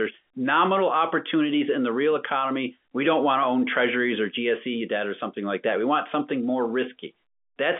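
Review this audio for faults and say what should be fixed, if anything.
No faults; nothing needs fixing.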